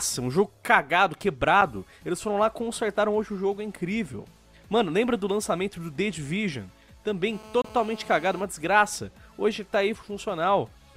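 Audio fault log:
1.61 s and 7.62–7.64 s, gap between stream segments: abrupt, hard-edged holes of silence, about 6 ms and then about 25 ms, falling 6 s apart. The time stamps of consecutive segments leave a small gap, and the player fills it with silence.
7.33–8.40 s, GSM phone buzz: a hard, raspy buzz at 217 Hz, rich in harmonics and about 20 dB below the signal, unrelated to the sound. A nearby 2G phone on a call transmits radio bursts 217 times a second, and the audio circuit rectifies them.
8.40–10.12 s, GSM signalling bursts: the steady buzz gives way to faint, even ticks with a longer 217 Hz buzz twice a second, well below the signal. The same phone, still on a call but with its user silent, now sends only short groups of bursts, which the circuit rectifies.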